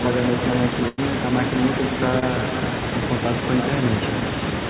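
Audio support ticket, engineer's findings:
Echo with no canceller, throughout: a quieter, thinner copy of the speech trails the original by around a third of a second, at about 7 dB below it. The far end's loudspeaker audio is reaching its microphone with no echo cancellation.

Burst of packet loss, 0.88–1.00 s: the last sound is held and fades as a buzz or hiss for about 96 ms, then the speech jumps ahead with about 100 ms missing. This points to several consecutive packets lost or arriving late, bridged by receiver concealment.

Short concealed packet loss, 2.20–2.24 s: a brief smear lasting about 20 ms where the receiver extended the previous sound before blending back. A short stretch never reached the decoder in time. The call's band limit at 4 kHz runs throughout the clip, consistent with G.711 narrowband.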